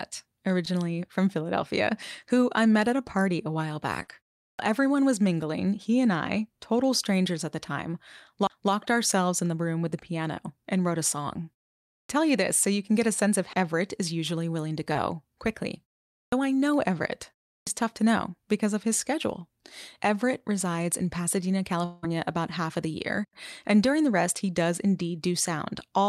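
At 0.65 s there's a short concealed packet loss: about 20 ms of the call arrived too late, and the decoder patched the hole by extending the previous sound before blending back. It's a quick smear. The same thing happens again at 14.93 s.

From 4.02 to 4.09 s a burst of packet loss knocks out about 60 ms. The receiver carries the last sound forward for about 50 ms, turning it down as it goes, so you hear a brief held buzz or fading hiss and then the sound picks up slightly further along.

Right after that, at 4.50 s, is the first clipped start after a pause. The output device dozes off during silences, and on waking it swallows the first 80 to 90 ms of sound. The same abrupt, front-chopped onset comes at 12.01, 16.24 and 17.59 s, each after a pause of roughly a third to half a second.

At 8.47 and 13.53 s there are CD skips. The laser jumps to a different turn of the spiral and the player mutes for a few hundredths of a second, so each one is a small tick followed by a jump to another spot in the sound.

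From 21.85 to 22.05 s about 180 ms is missing. The gap is filled for its whole length with a continuation of the previous sound that fades rather than dropping to silence, and then the audio resumes further on. The likely cause is a long network dropout.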